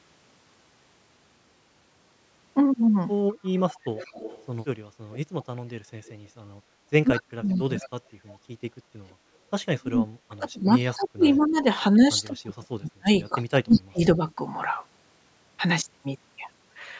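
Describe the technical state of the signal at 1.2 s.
At 1.2 s the speech signal is intact, with no dropout, distortion or other fault, just the ordinary call microphone processing that trims the lowest bass and leaves nothing above 8 kHz.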